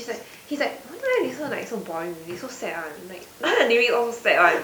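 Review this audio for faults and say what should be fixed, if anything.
Nothing needs fixing: the signal shows no technical faults, and the only other sound is the room's own background noise sitting about 25 dB below the speech, which belongs to the recording rather than the system.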